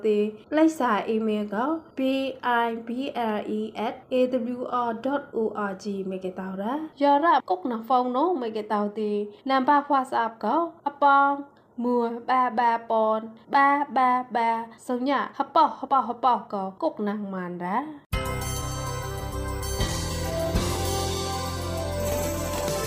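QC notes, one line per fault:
No audible faults found.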